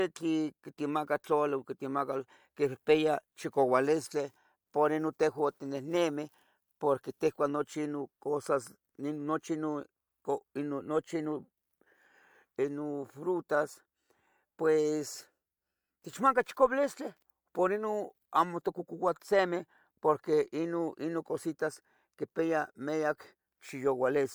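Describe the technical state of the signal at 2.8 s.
At 2.8 s the speech signal is intact, with no audible fault at that point.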